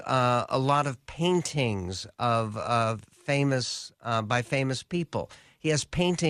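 A speech recording, and nothing in it is technically wrong.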